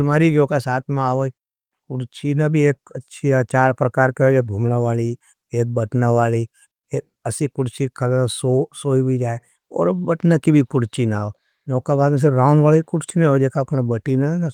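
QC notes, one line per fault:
No faults to note.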